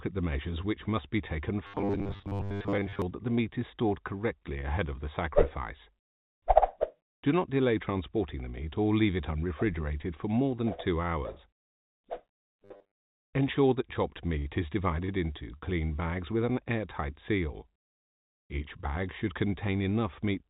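Robotic sound from repeated short buffers appears from 1.67 to 3.02 s and again from 12.64 to 13.00 s. The audio turns into a rigid, metallic buzz at 100 Hz, likely because a 10 ms chunk was replayed over and over while most of the real audio was skipped. A spectrogram shows evenly spaced horizontal harmonic lines at multiples of 100 Hz, and the waveform repeats in roughly similar 10 ms cycles. A burst of packet loss at 14.39 to 14.48 s drops about 30 ms of audio. The receiver covers it with 57 ms of continued sound that fades away, then resumes later in the audio. On a spectrogram this looks like a frozen, decaying smear. The waveform shows a shrinking repeated pattern and then a jump where the audio restarts. Short concealed packet loss occurs at 15.05 to 15.11 s and at 15.58 to 15.64 s. Each time about 30 ms never arrived and was patched with 31 to 34 ms of extrapolated sound. The result is a brief smear or wobble, seen as a short blurred patch on the spectrogram and a slightly stretched stretch of waveform. 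Across the whole clip, the spectrogram is empty above 4 kHz, as expected from the G.711 mu-law call path at 64 kbps.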